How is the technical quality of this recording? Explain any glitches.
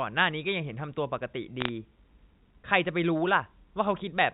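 It's narrowband telephone speech, capped below 4 kHz by the G.711 coding, with one short glitch. From 1.60 to 1.69 s there's a burst of bit errors on the digital phone line. Flipped bits corrupt individual samples, so the voice carries a brief crackle of sharp ticks.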